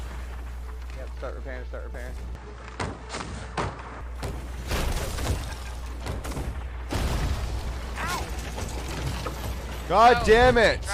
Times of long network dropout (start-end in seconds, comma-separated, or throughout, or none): none